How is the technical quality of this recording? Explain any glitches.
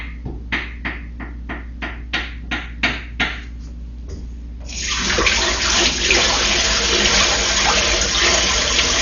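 Quality is poor throughout, with heavy codec damage. Dolby Digital compression, running the whole clip, is the likely cause: at a low rate, around 40 kbps, the encoder drops everything above 7 kHz and starves many frequency lines, which decoder dither fills. The sound is dull, with rough, fluttering noise around tones.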